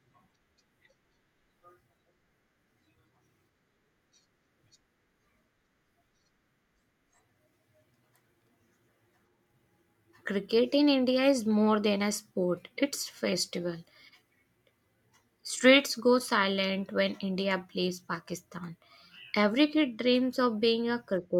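No technical faults can be heard anywhere in this speech recording. There is nothing here to place on a timeline or trace to a cause.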